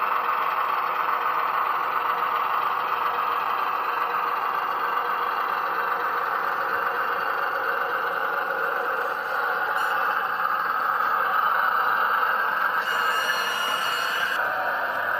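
A corrupt frame decoded at 9.67 to 9.70 s: damaged compressed data, about one frame, was played anyway, scattering energy into a brief glitch peaking near -15 dBFS.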